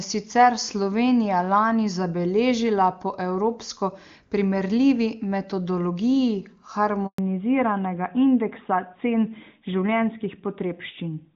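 A handover gap opens at 7.06 s and lasts 120 ms, to 7.18 s. The call was passed from one network link to another, no speech frames arrived during the switch, and the sound collapses almost instantly into silence, with everything spoken in that window gone.

A fallback to narrowband follows from 7.18 s to the end. Before it, the wideband path is clean and full, consistent with HD Voice at its top rate. Afterwards, nothing above 4 kHz remains, pointing to the older narrowband AMR codec, so the sound turns dull, boxy and rough.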